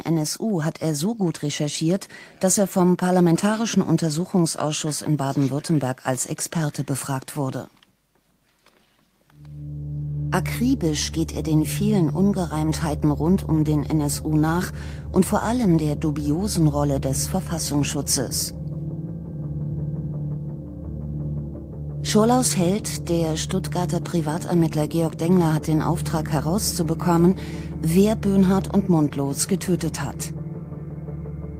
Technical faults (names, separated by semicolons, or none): none